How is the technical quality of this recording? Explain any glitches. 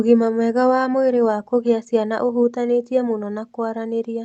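No glitches or dropouts are audible in this speech recording.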